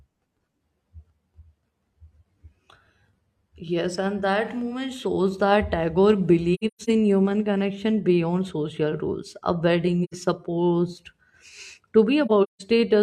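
Speech with AAC frame loss with muting at 6.54–6.90 s (just before "in human connection beyond"), 10.04–10.14 s and 12.26–12.62 s. The sound fades to silence in soft-edged gaps, the longest about 150 ms, unlike a hard dropout.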